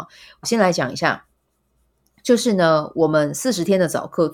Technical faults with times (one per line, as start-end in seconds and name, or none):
none